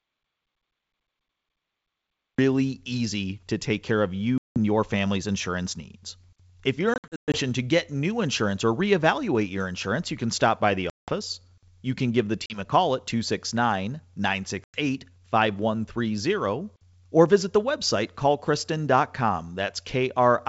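Audio dropout to silence runs from the start of this speech recording to 2.39 s, with silence and no room tone until "easy to take care" begins, most likely because the input was lost while recording continued. Packet loss on an ADPCM call follows at 4.38 s (180 ms lost, between "to take care of" and "your family's insurance needs"), 6.94 to 7.40 s (260 ms scattered over 400 ms), 10.90 s after "can stop by the" (180 ms), 12.46 s (40 ms) and 14.64 s (100 ms). Each gap is a hard-edged hole. When the sound resumes, the decoder's predictor and step size no longer match the sender's, so the speech returns slightly distorted before it settles, heard through the otherwise clean 64 kbit/s G.722 wideband band.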